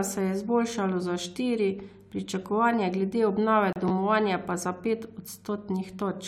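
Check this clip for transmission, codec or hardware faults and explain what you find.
Two transport faults sit close together in the speech, both just after the 3.7 s mark.

From 3.73 to 3.76 s there is a gap between stream segments. The timestamps of two consecutive 2-second segments leave a hole that the player fills with silence, adding about 32 ms. It is heard as a brief hard-edged dropout, with no audio lost.

At 3.88 to 3.90 s the chunks are out of order. A 10 ms chunk was delivered or written one slot late, so it plays after the chunk that should follow it. The swapped material creates hard joins, heard as a short garbled flick.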